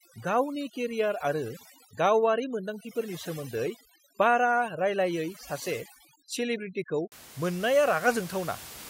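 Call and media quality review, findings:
Overdone noise removal, 0.0 to 7.12 s. Suppressor set far too strong for room noise about 15 dB below speech: bands near its noise estimate pulled down or gated off, quiet speech detail lost too. Background drops, breaks up into twinkling specks.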